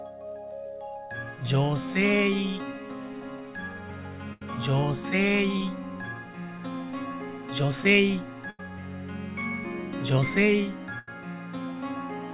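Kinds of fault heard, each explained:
Burst of packet loss: at 4.33, 8.5 and 10.99 s, consecutive packets arrive too late or not at all. The receiver holds and fades the last sound for about 80 to 90 ms as a buzz or hiss, then resumes past the missing stretch.
Short concealed packet loss: at 5.57 and 6.58 s, the decoder misses about 30 ms and 10 ms of audio. It patches each hole by extending the preceding sound and blending back, leaving a brief smear or wobble within the 4 kHz-limited call audio.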